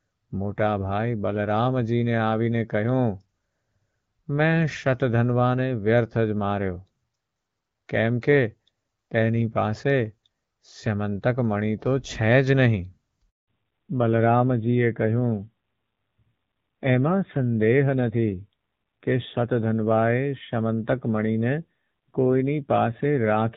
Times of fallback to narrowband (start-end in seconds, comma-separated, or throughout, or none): 13.48-23.56